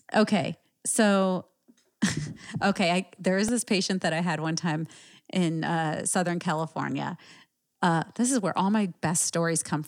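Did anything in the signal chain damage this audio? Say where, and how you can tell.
Yes, a repeated buffer fault at the driver or buffer stage, at 0.94 s and again at 3.48 s, just after "okay I there is" and before "this patient that I". Each time the playback device ran short of fresh samples and played its last tiny block twice more. The repeated piece is about 1.33 ms long, which fits a 64-sample buffer, so it is heard as a brief click or buzz rather than a stutter. A few milliseconds of speech are lost.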